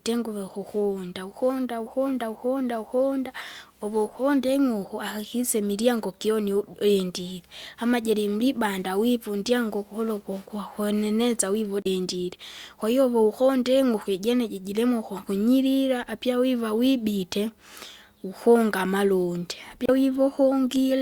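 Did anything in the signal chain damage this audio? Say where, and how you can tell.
Yes, at the codec stage: damaged data in a compressed stream. A short glitch at 11.82 to 11.87 s, right after "mgukuru kukwa kweneneza vivu", and another at 19.84 to 19.90 s. Corrupted frames there made the decoder lose sync and skip to the next valid header.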